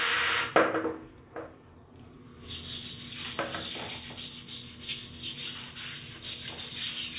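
No technical faults are audible.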